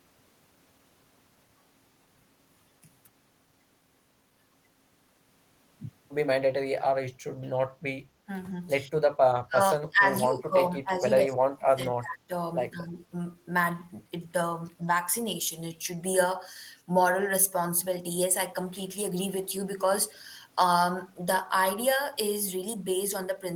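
An echo canceller that likely couldn't tell its own talker from loudspeaker echo during double talk turned both down, causing speech suppressed in double talk at 8.88–8.94 s, 9.46–10.11 s, 10.27–12.33 s and 12.71–12.97 s. The speech sinks, by up to about 30 dB.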